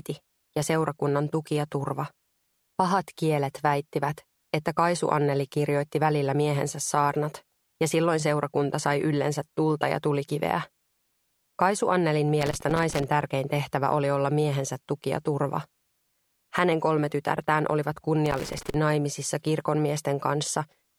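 At 12.41 s a burst of loose connector crackle breaks in and scratches away until about 13.04 s, then it returns from 18.26 to 18.74 s. What you're hearing is a worn or dirty contact that keeps making and losing connection as something shifts, so the signal gets chopped into ragged fragments. Both bursts are irregular and gritty, not a steady hum or a clean dropout.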